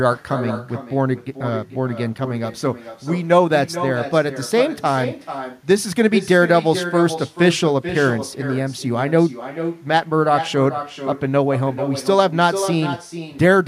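Echo with no canceller runs throughout this speech clip: a far-end loudspeaker feeds the mic, returning every phrase around 400 ms later, about 10 dB quieter and thinner.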